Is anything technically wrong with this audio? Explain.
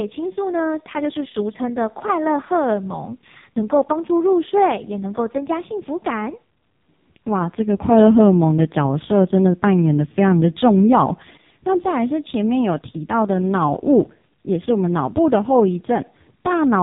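Yes. Throughout the whole clip, the speech has passed through the AMR narrowband mobile codec at a very low rate. The codec samples at 8 kHz and rebuilds each 20 ms frame from a vocal-tract model fed by a handful of pulses, so nothing above 3.8 kHz survives. The heavy damage, which fits AMR-NB's lowest mode of about 4.75 kbps, leaves the voice muffled and boxy, with a buzzy, synthetic edge.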